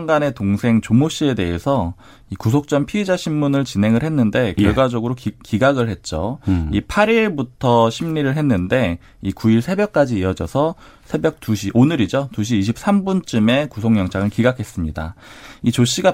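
Nothing stood out as a technical fault on listening to this speech recording.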